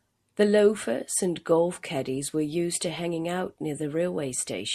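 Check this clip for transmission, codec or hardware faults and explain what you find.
Listening closely to the speech, nothing stood out as a problem anywhere in the recording.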